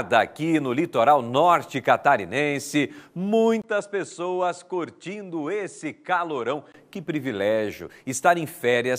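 At 3.62 s a 20 ms gap opens, then the sound turns duller and roughly 5 dB quieter, with nothing above 10.5 kHz and a faint new noise floor. The likely cause is an input switched to a poorer device, reverting at 6.74 s.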